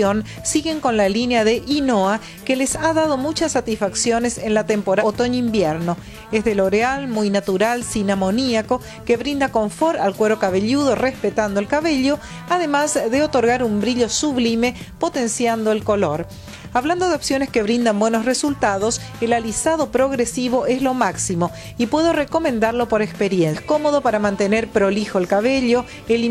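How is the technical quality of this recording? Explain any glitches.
Two short glitches mar the recording, both caused by damaged data in a compressed stream, at 4.97 to 5.03 s and 23.50 to 23.55 s. Corrupted frames made the decoder lose sync and hunt for the next valid header, so each spot produces a brief glitch in the audio.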